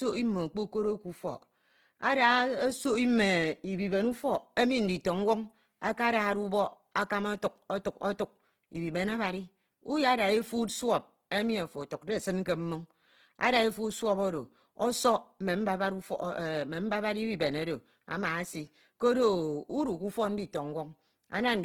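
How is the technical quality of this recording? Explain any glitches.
The recording has plainly audible codec damage throughout, most likely from Opus compression. Speech sounds rough and grainy rather than swirly, which fits a bitrate near 16 kbps in the music (CELT) mode. With too few bits, each band keeps its energy but its detail is filled with folded or noise content. A spectrogram shows full bandwidth up to about 20.2 kHz, densely filled but smeared and noisy, without holes.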